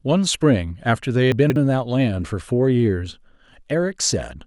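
Between 1.32 and 1.56 s, a 60 ms chunk of the speech arrived three chunks late and plays after the three that should follow it: chunks out of order. Nothing is lost, but that quarter-second sounds jumbled, with three hard joins.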